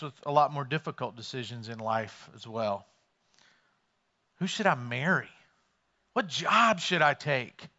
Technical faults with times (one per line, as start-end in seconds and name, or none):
none